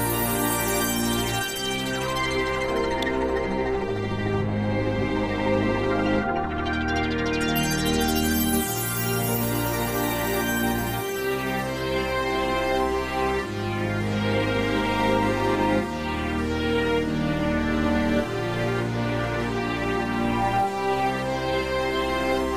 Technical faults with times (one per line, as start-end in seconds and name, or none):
3.02 electrical switching spike